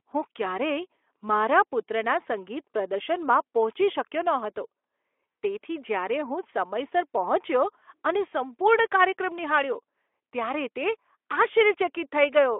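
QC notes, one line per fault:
No faults are heard in this speech clip. The Speex coding is audible as a telephone-band sound limited to roughly 300 Hz to 3.4 kHz, with only a light coded texture that fits a bitrate around 15 kbps.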